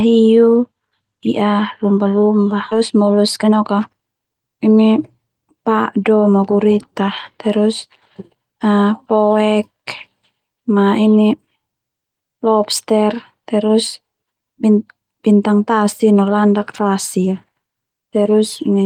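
A skip ahead at 2.71 s drops roughly a second of speech. Playback jumps straight forward with no gap filled in, as queued audio was dropped to shed about a second of built-up delay. The two sides of the cut are joined almost directly, so the speech lurches abruptly.

A jitter buffer speed-up follows from 2.81 to 4.56 s. Here the receiver trims short pitch-period slices again and again to drain its backlog, about a third of a second in all. The speech runs at about 115% speed at unchanged pitch and sounds noticeably hurried.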